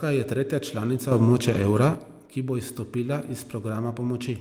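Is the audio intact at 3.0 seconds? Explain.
Yes, at 3.0 seconds the speech plays through intact, with no audible fault at that moment.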